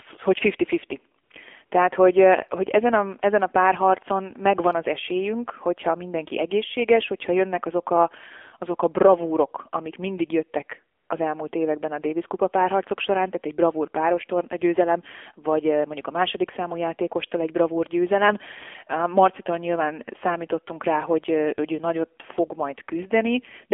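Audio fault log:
throughout: AMR narrowband mobile codec. The speech went through AMR-NB at 7.4 kbps over a line passing roughly 250 Hz to 3.4 kHz. With so few bits the vocal-tract model is coarsely driven, so the voice sounds plainly buzzy and synthetic, muffled with no treble.
1.24 s, 1.66 s, 10.98 to 11.10 s: AMR comfort noise. The phone judged the talker silent and sent no speech frames for 60 ms, 60 ms, then 120 ms, between "bravúrok amik mindig jöttek" and "az elmúlt években a". The receiver filled each gap with smooth synthetic noise, so the real background switches out briefly.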